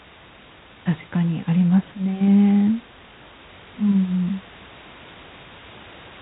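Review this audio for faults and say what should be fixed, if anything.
G.726 ADPCM coding runs through the whole clip. Each sample carries only a few bits of difference from an adaptive prediction, so the plainly audible quantisation error becomes a harsh, rasping hiss that rises and falls with the speech, which fits the 24 kbit/s mode. On a spectrogram, nothing appears above 4 kHz, and a grainy noise floor fills the band under speech energy. The room noise, about 23 dB below the speech, sits beneath it. Prevent this by carrying the audio at 32 kbit/s or over a wideband codec.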